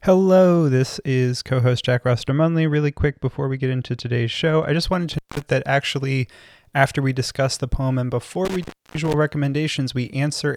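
From 2.29 to 4.82 s the speech turns dull and muffled: de-emphasis has been applied wrongly, putting a treble cut on audio that didn't need it. The response slopes smoothly down to about 11 dB lower at 10 kHz than at 1 kHz, so a spectrogram shows the upper bands visibly darker across that stretch.

An intermittent contact then opens twice, with the speech cutting out between crackles. The first break, from 5.13 to 5.42 s, opens for about 182 ms just before "that actually after we". The second, from 8.45 to 9.14 s, opens for about 309 ms just after "the poem and before". On the waveform each break shows as a sharp spike at either edge around a near-flat gap of faint hiss.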